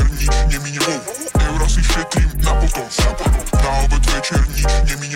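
Changing processor or graphics load is shifting the shared ground under the audio circuit, letting computer activity noise leak in from 0.55 s to 4.2 s: a buzzy, chirping rasp pulsing at around 200 times a second, roughly 30 dB beneath the sound, and following the machine's activity rather than the audio.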